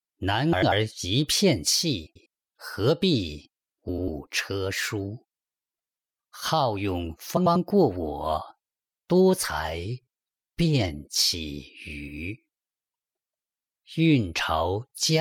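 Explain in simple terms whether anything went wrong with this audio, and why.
Four times, at 0.52, 2.06, 3.88 and 7.36 s, frames out of order swap two neighbouring 0.1-second chunks, so the sound briefly flutters.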